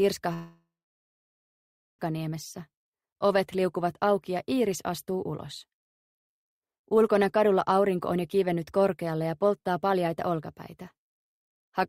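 From 0.33 s to 2.01 s, the stream most likely suffered a long network dropout: no audio reached the receiver for about 1.66 s, and that stretch was never played. The receiver carried the last sound forward as a decaying buzz or hiss that fades out within a few tenths of a second, leaving about 1.31 s of silence. Sound resumes at 2.01 s, jumping ahead with the lost portion simply gone.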